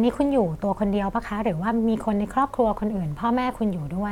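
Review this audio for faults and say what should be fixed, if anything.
Nothing in this speech recording needs fixing. No faults turn up anywhere in the clip, so no prevention step is called for.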